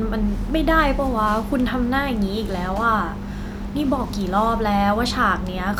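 Nothing faulty is audible anywhere in this speech recording.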